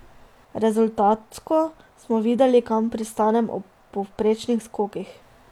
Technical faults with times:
none

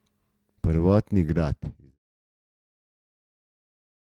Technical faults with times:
none

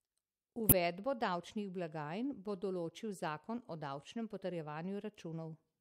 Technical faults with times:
0.69-0.74 corrupt frame decoded

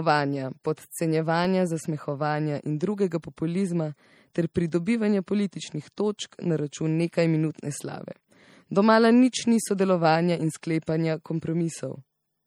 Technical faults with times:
0.00-12.47 MP3 compression
1.45 block of digital silence

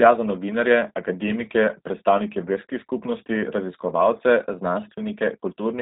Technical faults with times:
0.00-5.81 G.729 codec

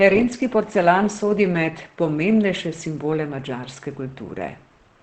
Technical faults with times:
0.00-5.02 Opus compression

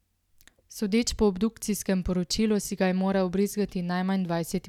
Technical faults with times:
none

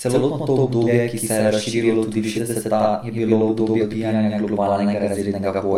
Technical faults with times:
0.00-5.78 channel delay (doubling)
0.86-0.88 compressed frames skipped
2.35-2.39 compressed frames skipped
3.79-3.82 compressed frames skipped
5.13-5.17 compressed frames skipped

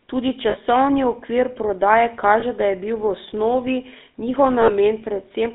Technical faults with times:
0.00-5.54 GSM full-rate codec
0.50-0.57 lost GSM frames
2.40-2.43 lost GSM frames
4.62-4.71 lost GSM frames

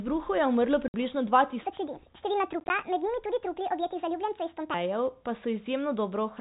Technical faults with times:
0.88-0.94 packet loss filled with silence
1.63-4.74 section at the wrong speed
2.60-2.70 packet loss filled with silence

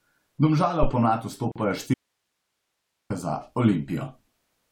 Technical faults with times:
1.52-1.56 gap at a join of encoded pieces
1.94-3.10 audio dropout to a faint residue

